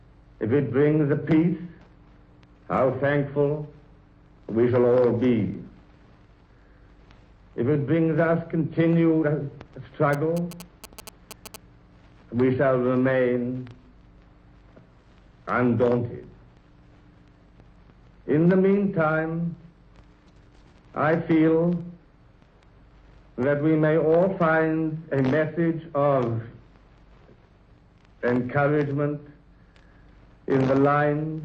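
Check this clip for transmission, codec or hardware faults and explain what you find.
One hardware-related fault is present. From 10.13 to 11.56 s, GSM signalling bursts intrude. A nearby 2G phone's radio bursts get rectified by the audio circuitry. They give galloping ticks and a 217 Hz buzz, well below the main sound.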